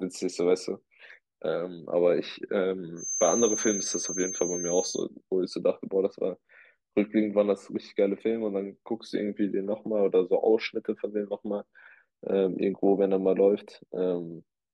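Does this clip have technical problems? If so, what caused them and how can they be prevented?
Yes. From 2.95 s to 5.06 s a feedback whistle sits under the speech: a thin, steady tone at 6.3 kHz, a few dB below the speech level and swelling and fading slowly in loudness. The likely cause is a loudspeaker-to-microphone loop running right at the edge of feedback, so that one high frequency keeps recirculating without building into a full howl. It can be prevented by lowering monitor gain, moving the microphone away from the loudspeakers, or notching out 6.3 kHz.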